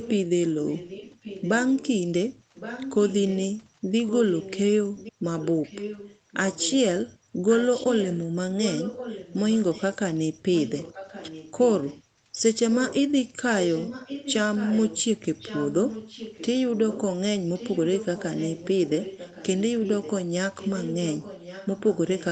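A faint, delayed second copy of the speech trails the main talker by about 1.1 s, in stretches from 0 to 1.89 s, 2.54 to 3.37 s, 4.07 to 6.79 s, 7.46 to 9.96 s, 10.52 to 13.04 s, and 13.68 s to the end. It sits about 15 dB under the speech, rising to about 10 dB in the second and fourth stretches. This is an echo leak, likely from a far-end loudspeaker whose echo canceller let part of the pickup return.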